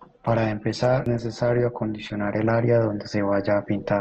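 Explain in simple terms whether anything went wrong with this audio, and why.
Two things went wrong. For the first 2.51 seconds the speech comes from an adaptive stream starting at a low bitrate: the player began with a cheap, rough copy so playback could start quickly. The crisp top end above about 12.2 kHz is missing, and the speech sounds smeared. It then switches to a better copy, and the sound simply gets clearer, with no pause or missing piece.

At 1.06 s there is a CD skip: a tiny tick and a very brief silence, after which the speech carries on from a slightly different spot on the disc. Unlike the stream's quality change, this jump loses or repeats a little of what was said.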